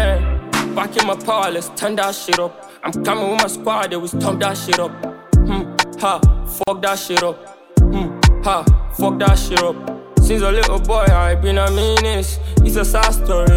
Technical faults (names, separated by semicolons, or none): gap at a join of encoded pieces